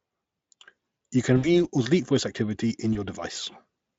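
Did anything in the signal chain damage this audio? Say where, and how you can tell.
Yes, at the network stage: VoIP packet loss concealed by the speech codec. At 1.37–1.64 s, before "or delete voice activity," and 2.93–3.00 s, after "delete voice activity in," the Speex decoder stretches its last frame into a fading buzz or coloured noise, with about 60 ms and 20 ms missing.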